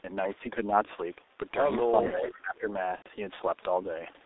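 Muffled, hoarse speech runs through the whole clip, with smeared consonants and nothing below about 300 Hz or above 3.7 kHz. This is the G.723.1 codec at 6.3 kbit/s, heavily damaging the audio because its coarse voice model updates too slowly to follow rapid articulation.

From 2.01 to 2.39 s a faint delayed copy of the voice trails the speech, arriving about 411 ms late and roughly 10 dB quieter. This is echo leak, likely from a far-end loudspeaker whose echo canceller let part of the returning signal through.

Between 2.11 and 2.67 s the voice dips and thins in patches, losing up to about 15 dB over roughly four tenths of a second in total. This is speech suppressed in double talk, likely because the echo canceller mistook overlapping talk for echo and turned everything down.

From 2.96 to 3.08 s the speech melts into a stretched, fading sound for 90 ms, which fits three lost 30 ms packets. 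This is VoIP packet loss concealed by the speech codec, which extrapolated the last pitch and filter while lowering the gain, then muted the third lost frame.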